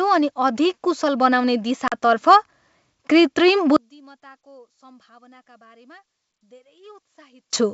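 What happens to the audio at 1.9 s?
The speech drops out abruptly from 1.88 to 1.93 s, a hard-edged silent gap of about 40 ms, and resumes with slight distortion before settling. This is packet loss on an ADPCM call: roughly two packets went missing over the G.722 link and were filled with silence, so the decoder's adaptive predictor and step size drifted from the sender's and needed some tens of milliseconds to re-converge.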